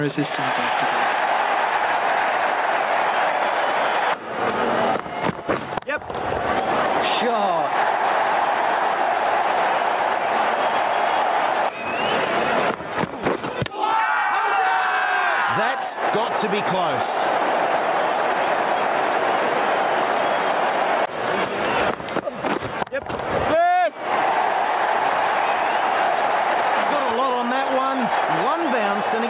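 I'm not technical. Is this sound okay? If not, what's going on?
No. All the way through there's gain pumping: loud and soft parts end up closer in level, so everything feels squashed. The likely cause is the input level set far too high, with a fast limiter yanking it down. The dull, phone-like top end comes from the call line, which carries nothing above 4 kHz.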